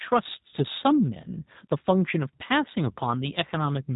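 G.729 codec throughout: the speech is rebuilt from a vocal tract filter and sparse pulses, with nothing above 4 kHz, giving a plainly rough, synthetic sound that fits 8 kbit/s coding.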